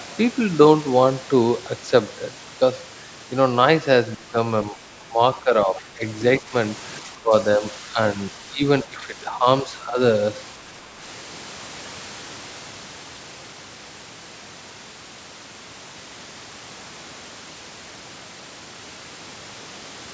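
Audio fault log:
4.16–4.38, 4.71–4.77, 5.08–6.03, 6.40–6.54, 7.01–8.18, 8.49–9.99 and 10.64–10.95 s: speech suppressed in double talk. The speech dips in patches, by about 5 to 10 dB and about 20 dB at the first. The cause is likely the echo canceller turning it down while the far side talked.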